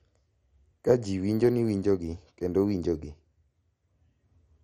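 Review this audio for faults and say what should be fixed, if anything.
MP2 compression, throughout the clip: the speech sounds dull, gurgling and granular, and nothing remains above 15.2 kHz. The likely cause is MPEG Layer II starving its upper sub-bands of bits, switching them off and coarsely quantising the rest, which fits a rate near 56 kbps. To prevent it, encode at a much higher bitrate or keep a lossless master.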